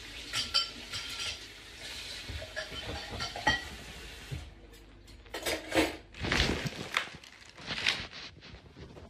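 No technical faults can be heard anywhere in this audio.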